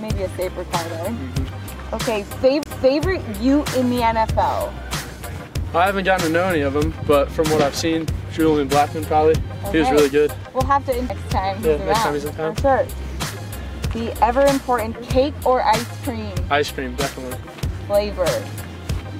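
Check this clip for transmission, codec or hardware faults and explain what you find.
Two CD skips are audible. From 2.63 to 2.66 s the playback ticks, mutes for roughly 30 ms, and resumes elsewhere. At 11.09 s a much briefer mute and tick occur. Each time, a knock or disc flaw threw the laser onto another spiral turn, so the sound jumps abruptly.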